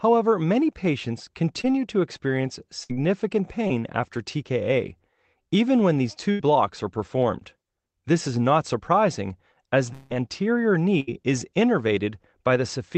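At 1.61 to 1.66 s, between "many patients" and "to experience", there is a short concealed packet loss. About 20 ms of the speech never arrived in time. The receiver filled the hole by extending the last sound and then blended back into real audio. It sounds like a quick smear or wobble. The same thing happens at 3.67 to 3.71 s, again covering about 20 ms.

A burst of packet loss follows at 2.84 to 2.91 s, just after "to experience". About 60 ms went missing in a row. The receiver held the last sound and let it fade, so a brief buzz or hiss replaces the speech. Then the speech resumes further on. The same fault returns at 6.31 to 6.41 s, where about 80 ms is lost, and at 11.00 to 11.09 s, where about 80 ms is lost.

At 9.93 to 10.12 s, right after "is not surprising as", the gap is longer. Roughly 180 ms of speech is missing. The whole stretch is filled with a continued sound that fades, and there is no true silence. 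The speech then picks up further along, with the middle part gone. This is likely a long network dropout.

All of it passes through an Opus call path limited to about 8 kHz. The coding noise fits a rate of about 20 kbps.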